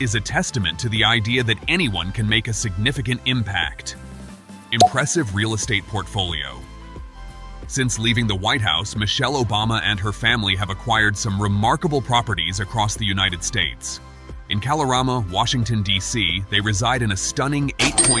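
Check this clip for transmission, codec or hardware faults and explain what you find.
Nothing turned up on this one: I listened closely and didn't hear any faults worth flagging.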